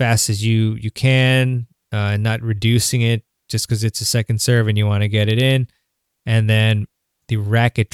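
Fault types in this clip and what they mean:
Listening to the speech turned up nothing that stood out as a technical problem.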